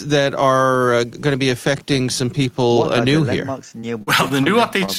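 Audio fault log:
3.69–4.48 s, repeated packet loss (robotic sound): choppy stretch with six breaks, the longest 43 ms. Audio kept going missing or arriving late, and each hole was patched by extending the previous sound. About 124 ms was synthesized this way, roughly 16% of the span.
4.86–4.90 s, short concealed packet loss: a brief smear or wobble near the end. About 20 ms of audio never reached the decoder in time. The receiver continued the preceding sound to fill it over 20 ms, then blended back into the real signal.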